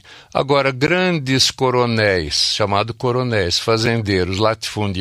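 At 0.87 s the speech drops into a block of digital silence for about 13 ms, and at 3.86 s it happens again, this time only 5 ms long. In both spots a run of samples was swapped for zeros, likely because the output buffer wasn't filled in time. The sound cuts out and back with no fade. The first comes across as a brief dip, the second as a quick tick.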